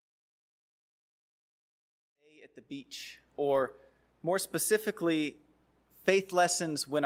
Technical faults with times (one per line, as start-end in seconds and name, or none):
none